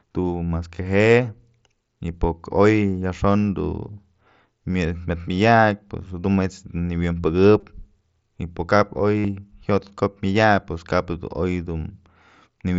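At 7.60 to 7.63 s and again at 9.19 to 9.25 s, concealed Bluetooth headset packet loss fills the gaps with repeated recent waveform, giving a brief buzzy hold before the mSBC speech resumes.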